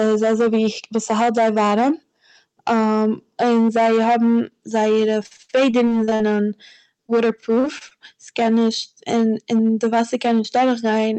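Throughout the 11-second speech clip, the signal is driven about 9 dB past what the chain can pass, so roughly a tenth of it is cut flat: hard clipping, heard as harsh fuzz on loud syllables. From 5.23 to 6.29 s, and again from 7.07 to 7.93 s, repeated packet loss leaves 19 short holes, up to 65 ms, patched by stretching the previous sound into choppy, robotic fragments. The call codec's roughly 8 kHz bandwidth limit is audible alongside.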